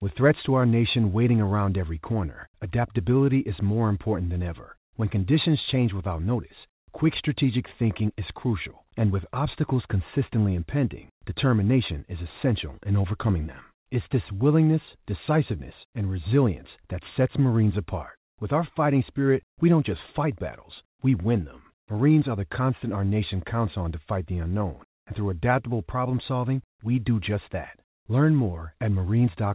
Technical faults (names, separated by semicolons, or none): none